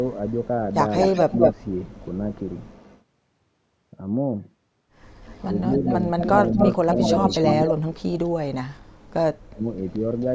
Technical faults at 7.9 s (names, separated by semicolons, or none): speech suppressed in double talk